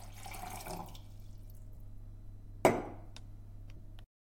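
A brief noisy smear replaces the sound at 1.76 s, and again from 3.77 to 3.79 s. These are lost LE Audio frames: the LC3 decoder filled each gap with the last spectrum under random signs. The 10 ms and 20 ms gaps fit one and two lost frames.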